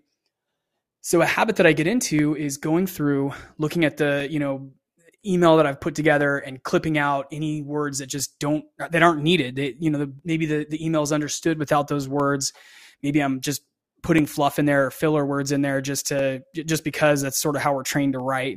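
From 0.19 s to 18.2 s the speech is broken by periodic USB or driver dropouts, one every 2.0 s. At each point roughly 2 ms of audio goes missing and is replaced by silence, as though something stalled the USB transfer or audio driver on a fixed schedule. The sudden gaps cut the waveform and come through as evenly spaced ticks, heard only where speech is present.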